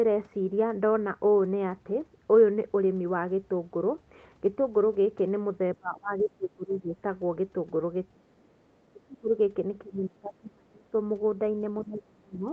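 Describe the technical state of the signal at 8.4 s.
The speech sinks by about 30 dB from 8.13 to 8.5 s, likely speech suppressed in double talk: the echo canceller, unable to separate overlapping talkers, attenuates both.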